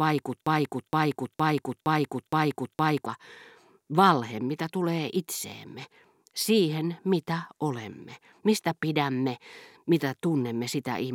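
From the very start to 3.06 s, a fragment of about 0.47 s repeats six times back to back: a broken-record loop, likely from a stalled player or stream.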